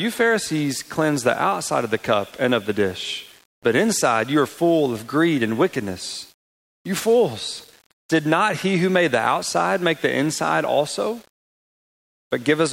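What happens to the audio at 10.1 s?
Low bit depth without dither is what you hear at 10.1 s, and it isn't confined to that moment: the same grainy distortion runs through the whole clip. The likely cause is that the signal was rounded to very few levels with no dither, which fits about 7-bit rounding. Because the error tracks the waveform, it sounds like grit that changes with the sound, sitting roughly 30 dB below the signal and growing more obvious in the quieter passages.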